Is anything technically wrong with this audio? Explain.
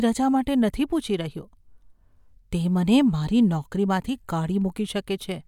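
No, there's nothing technically wrong that I can hear in this speech recording.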